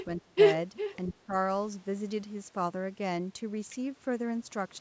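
From 0.0 to 0.05 s a faint copy of the speech trails 401 ms behind, about 20 dB down. This is likely an echo leak from a loudspeaker path the canceller missed, and on a spectrogram it shows as a weak, shifted repeat of the harmonic pattern. From 0.21 to 0.38 s the speech dips by up to about 20 dB, likely speech suppressed in double talk, leaving a hollow notch in the waveform envelope. The echo returns from 0.77 to 1.12 s, stronger at about 15 dB below the speech and again 401 ms late. Then from 1.13 to 1.33 s the speech sinks by about 15 dB, a brief fade in the spectrogram's energy.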